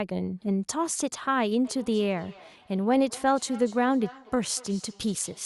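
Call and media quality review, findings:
Feedback echo between two devices from 1.65 s to end. Speech returns roughly every 200 ms, strongest repeat about 21 dB below speech. Second device replays audio into first microphone; canceller misses it.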